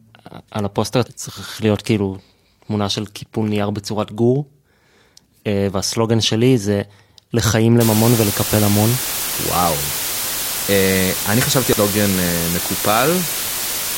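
From 7.8 s to the end, the speech is reduced to just 4 bits, with dither added before rounding, so the coarse quantisation error turns into steady white noise instead of distortion. The result is a constant, even hiss, nearly as loud as the speech itself.

At 11.73 s there is damaged data in the compressed stream: the decoder hits corrupted bytes, misreads that frame, loses sync and has to search for the next valid header. It comes through as a brief chirp or blip, sitting within the hiss.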